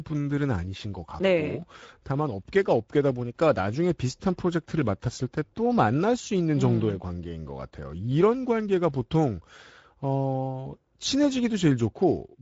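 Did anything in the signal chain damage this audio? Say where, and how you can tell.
Yes. The damage comes from the codec stage: the speech went through a Speex encoder, and the artefacts last the whole clip. Speex is a CELP coder that models the voice and spends a limited bit budget on the excitation signal. Here that budget leaves the speech plainly hoarse and noisy throughout, which fits a middle setting around 17 kbps. Nothing reaches above 7.7 kHz, and the upper band sounds like shaped noise.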